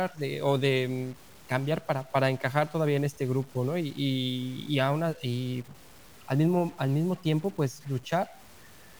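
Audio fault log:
Throughout: stuck bit. A grainy noise rides on the speech for the whole clip, and the pauses carry a low noise instead of silence. One data bit is held at a fixed value, likely from a faulty converter or data line. About half the samples land off by a step of about -50 dBFS in a waveform-dependent pattern, and the bit's correct state changes with the sign of small values near zero, so the gaps fill with noise.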